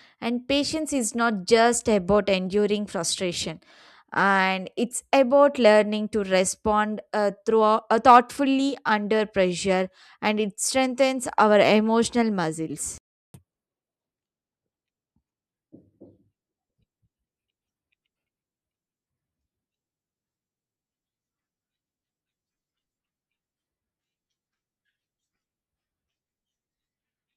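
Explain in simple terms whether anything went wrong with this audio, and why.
At 12.98 s the speech cuts out for about a third of a second, until 13.34 s. That's a playback stall, most likely the player running short of data.

Right after, from 13.34 to 14.07 s, you get catch-up at higher speed: the player races through the backlog at 1.5 times normal speed, so the speech sounds quicker and roughly seven semitones higher before settling.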